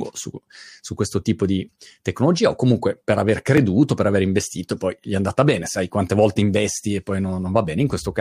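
At 3.57 s, between "o comunque per aver" and "per aver investito poi", a repeated buffer occurs: new audio arrived late, so the device replayed its last block twice more. Each block is only about 1.45 ms long, which fits a 64-sample buffer, so the repeats come across as a click or brief buzz rather than an audible stutter. Unlike a dropout, essentially nothing is missing; a tiny slice is simply duplicated with hard joins.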